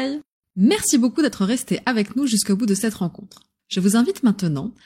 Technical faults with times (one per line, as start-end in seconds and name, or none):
none